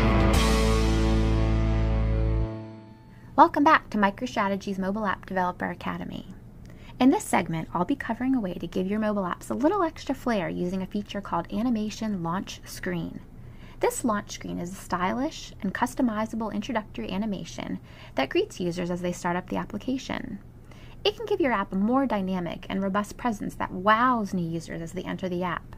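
No technical faults can be heard anywhere in the signal.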